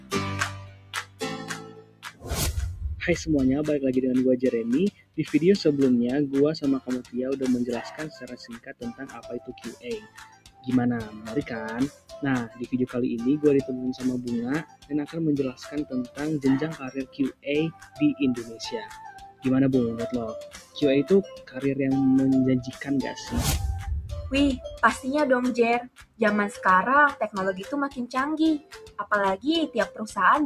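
Across the whole clip, a noise suppressor meant for speech has been applied to music or sounds. It treats sustained, steady material as noise, so the level swings by around 15 dB as the gain rides up on attacks and down on held parts. On a waveform, the envelope pumps instead of following the source. On a spectrogram, sustained bands and decays thin and break up while onsets stay bright.

The sound is cut by the noise suppressor in eight stretches. The first runs from 0 to 2.31 s, with a drop of about 18 dB. Next is 4.91 to 5.18 s at about 17 dB, then 6.8 to 12.68 s at about 17 dB, which is the longest, with roughly three seconds pulled down. Then come 14.63 to 19.45 s at about 17 dB, 20.48 to 21.58 s at about 12 dB, 22.68 to 22.84 s at about 6 dB, 25.85 to 26.2 s at about 17 dB, and 27.9 to 30.0 s at about 15 dB. In these stretches the sound sinks and its tails are cut short. They show as carved-out troughs in the waveform and as dark gaps in the spectrogram.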